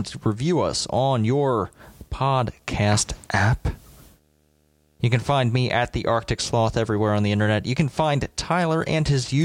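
From start to end, a faint video or display buzz sits under the speech, about 40 dB down: a screen or video cable leaking its 75 Hz field rate into the audio. A spectrogram shows steady horizontal lines at 75 Hz and its harmonics, with fuzzy hash spreading higher.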